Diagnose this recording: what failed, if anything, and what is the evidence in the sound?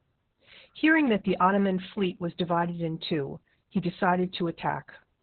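The failure is at the codec stage: Opus voice compression, heavily damaged across the whole clip. The speech is muffled, with nothing above about 4.4 kHz. It also sounds hoarse and slightly robotic. That points to narrowband SILK at roughly 8 kbps, coding the excitation too coarsely.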